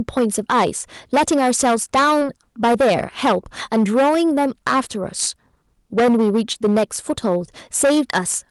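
Speech recorded through a stage driven about 14 dB beyond what it could pass shows hard clipping throughout. Roughly a tenth of the samples have their peaks sliced flat, and the added high harmonics give every loud syllable a harsh, fuzzy crackle. The audio then crossed a call path whose top end stops near 12 kHz, which fits Opus coding. In that path, short concealed packet loss occurs twice, from 2.19 to 2.23 s and from 6.53 to 6.57 s. Each gap fits one missing 20 ms packet that the receiver papered over by extending the preceding sound before blending back, heard as a brief smear or wobble.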